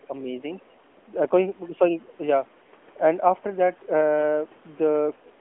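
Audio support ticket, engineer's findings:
Lost AMR speech frame, 2.64–2.67 s: brief dip or warble on the narrowband call path as the decoder reuses the last good frame at falling gain. Concealed, so no hard silent gap or click.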